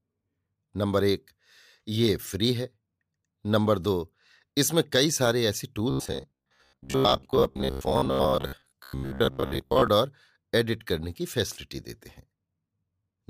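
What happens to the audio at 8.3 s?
Robotic sound from repeated short buffers runs from 5.91 to 9.88 s, covering 8.3 s. The likely cause is new audio arriving too seldom, so playback keeps looping the most recent sliver while the fresh signal is dropped. The buzz sits at about 66.7 Hz, which points to a loop of roughly 15 ms, and for most of that stretch the sound is repeated material. The speech becomes a stiff, metallic drone that only loosely tracks the words.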